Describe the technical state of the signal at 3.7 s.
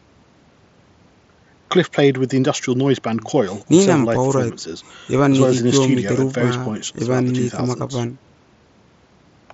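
At 3.7 s the speech is intact, carried through the Bluetooth mSBC headset path with its upper limit near 8 kHz and only the light graininess that codec brings to louder sounds.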